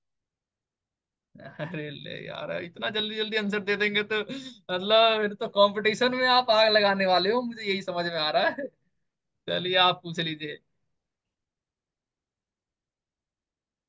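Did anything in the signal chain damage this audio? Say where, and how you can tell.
No, nothing in the signal chain has damaged this speech recording. None of the stages between capture and playback leaves an audible mark on it.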